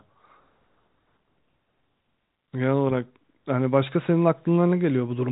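No faults to report: the speech carries the narrow telephone band of G.711 coding, with nothing above about 3.8 kHz, and no dropout, click or distortion appears anywhere.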